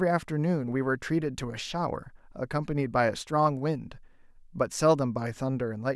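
No technical faults are audible.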